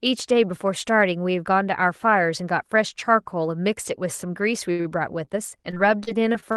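Around 4.71 to 4.81 s and again 4.81 to 4.87 s the speech hangs and smears with a faint buzz or dip, then at 5.25 to 5.29 s it briefly holds once more. These are short stalls from a late packet: the jitter buffer ran dry, and the receiver stretched the last sound for about 75 ms, 41 ms and 15 ms before resuming where it left off, so nothing is lost. From 5.71 s to the end, the voice turns choppy and robotic through the band-limited call sound, which reaches only up to about 12 kHz. That is repeated packet loss: six gaps, the longest 41 ms, are each patched by extending the previous sound, and roughly 100 ms of speech is missing.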